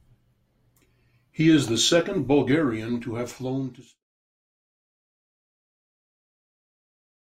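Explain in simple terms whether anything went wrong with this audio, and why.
Nothing went wrong; the speech just fades gently.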